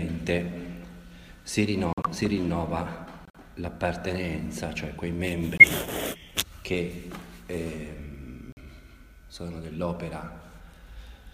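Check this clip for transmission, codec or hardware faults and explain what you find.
Four sudden gaps of silence from corrupt frames being muted, at 1.93–2.06 s, 3.25–3.36 s, 5.58–5.64 s and 8.52–8.58 s. The sound cuts out abruptly for about 130, 105, 60 and 60 ms, then resumes in time. Corrupted compressed frames were rejected by the decoder and replaced with silence. The gap lengths fit whole frames of roughly 26–30 ms each.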